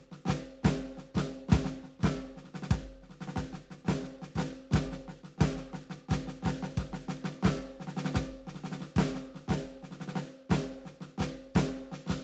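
No technical faults detected.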